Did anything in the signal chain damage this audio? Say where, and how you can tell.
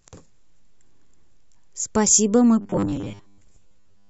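Yes. The driver or buffer stage likely ran short of incoming audio from 2.61 s to 4.09 s and kept replaying its last chunk to fill the gaps, so roughly two thirds of that stretch is repeated material while the real signal was skipped. The result is robotic sound from repeated short buffers: the speech collapses into a rigid, metallic buzz locked at 100 Hz, a rate that fits a repeated 10 ms buffer, while loosely tracking the original speech.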